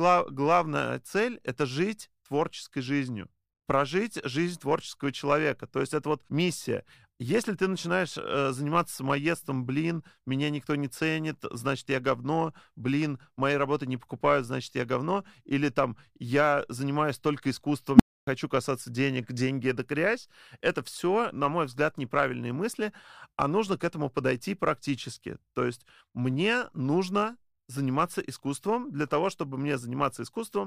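Speech clip with an unstable filter at 17.95 s: a tone near 200 Hz swells within 47 ms and clips, then the audio cuts out for 0.28 s until 18.27 s.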